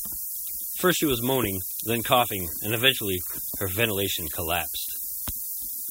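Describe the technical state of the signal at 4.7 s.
Low bit depth with noise shaping is present at 4.7 s, as it is throughout the speech. The signal is carried on very few amplitude steps, which fits a 5-bit word length. The rounding error from each step is fed back so its energy is pushed toward the top of the band. The result is a steady, thin hiss that climbs sharply in brightness and sits at roughly the same level as the speech itself.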